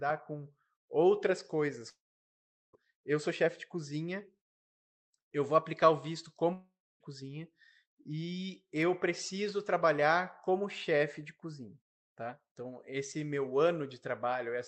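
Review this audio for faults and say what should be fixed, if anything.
Long network dropout at 1.89 to 2.75 s, between "com outras coisas" and "eu sou chefe de", and again at 6.53 to 7.02 s, right after "vou aplicar o visto". In each gap the last sound is stretched into a fading buzz, then goes quiet (about 0.76 s and 0.27 s of near-silence), and the audio resumes with roughly 0.84 s and 0.48 s lost. This is likely packet loss on the call link. Stabilising the network path or adding redundancy such as forward error correction would prevent it.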